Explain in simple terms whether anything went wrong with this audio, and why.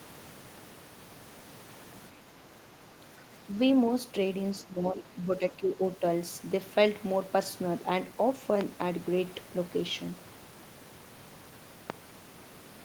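Between 4.63 and 5.81 seconds, two people most likely talked at once, and the echo canceller couldn't tell this talker's speech from the echo of the other side, so it turned both down. This is speech suppressed in double talk: for about a second the speech noticeably dips.

At 8.61 to 8.63 seconds and again at 11.90 to 11.92 seconds, a sudden electrical jolt, likely from a plug, switch, static or a driver glitch, got into the signal. Each one is a loud pop: a single sharp crack, much louder than the speech, which carries on underneath.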